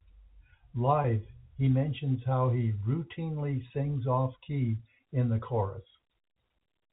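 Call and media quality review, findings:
Packet loss with pitch repetition, 1.02 to 1.04 s, just before "he mentions how he". Brief buzzy hold where the receiver's concealment replays the last pitch period over a 20 ms gap, consistent with one dropped packet. Jitter buffer/PLC on the receive side.

Same thing at 3.68 to 3.70 s, right after "mentions how he routinely". Another 20 ms hole bridged by repeated pitch, short enough that it never fades to silence. Probably a single lost packet again, through the G.711 A-law path.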